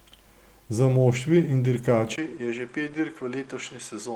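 At 2.16 s the speech drops out for about 20 ms, then returns duller and roughly 5 dB quieter, staying that way to the end. Nothing is left above 9.9 kHz, where before the switch the fullband Opus stream carried content up to 20.2 kHz, and a faint new noise floor sits well below the speech. The likely cause is an input switched to a poorer device, with a narrower band, a different gain and its own background noise.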